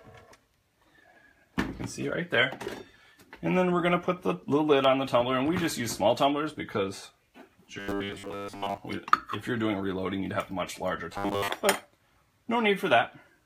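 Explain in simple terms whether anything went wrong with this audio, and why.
Robotic sound from repeated short buffers appears from 7.80 to 8.78 s and again from 11.12 to 11.48 s: the audio turns into a stiff, metallic 100 Hz buzz. Likely, new sound arrived too slowly, so a 10 ms slice kept repeating while most of the real audio was skipped.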